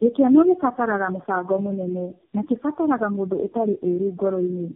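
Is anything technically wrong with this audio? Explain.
Yes. Throughout, there is tandem speech coding. What sounds like four low-rate speech codecs in a row each re-coded the previous one's damage, leaving rough, warbly, muffled speech with nothing above 3.4 kHz.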